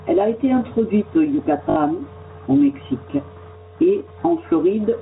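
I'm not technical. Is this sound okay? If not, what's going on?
No. All the way through, the level swells up in the pauses and then sinks each time the speaker gets loud, so the sound seems to breathe. That is gain pumping, most likely from the microphone level being set far too high so that an automatic level control keeps yanking it back down.

From 1.70 to 1.76 s there is a brief robotic stutter with a buzzy edge. That is packet loss with the last packet repeated: about 60 ms of audio went missing, and the system filled the gap by replaying the same tiny slice a few times.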